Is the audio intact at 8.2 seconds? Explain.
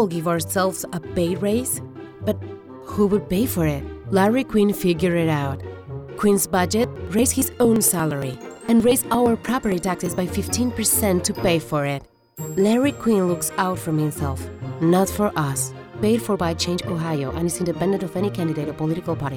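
No. From 6.73 to 10.29 s, periodic USB or driver dropouts skip about 10 ms of audio every 0.115 s, giving regular ticks; waveform shows evenly spaced splice discontinuities.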